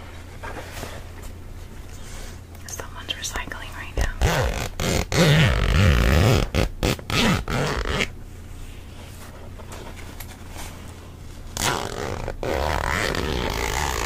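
No technical faults can be heard anywhere in the audio; the signal stays steady and intact throughout.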